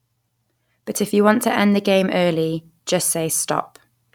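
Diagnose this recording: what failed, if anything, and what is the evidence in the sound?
Nothing failed; no stage shows any fault here.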